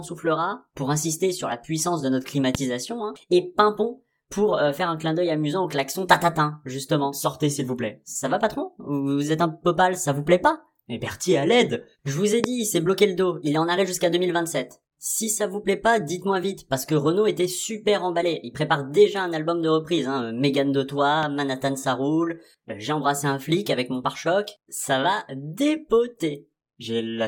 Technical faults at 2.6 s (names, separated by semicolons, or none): loud pop